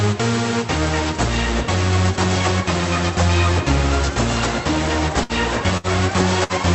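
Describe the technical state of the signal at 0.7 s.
At 0.7 s the signal is intact, carrying only the ordinary character of the Opus call path it passed through, with no fault present at that moment.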